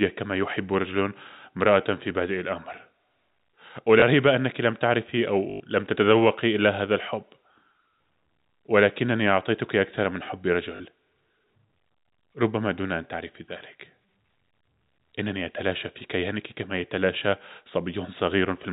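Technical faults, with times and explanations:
4.0 s, 5.5 to 5.6 s, 10.76 to 10.8 s: packet loss with last packet repeated. The previous packet is replayed to fill gaps of 20, 100 and 40 ms. The 100 ms run buzzes robotically at 50 Hz, which fits 20 ms packets.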